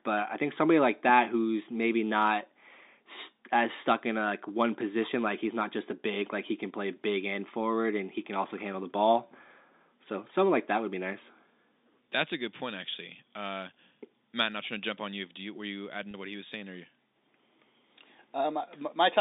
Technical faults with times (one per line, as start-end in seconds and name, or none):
16.11-16.14 packet loss with pitch repetition